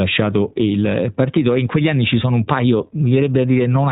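From start to finish the speech carries iLBC codec damage: nothing above 4 kHz, and a rough, slightly synthetic texture. Each short frame, which fits 20 ms frames in the 15.2 kbps mode, is coded independently, unlike plain band-limiting, which dulls without adding grit.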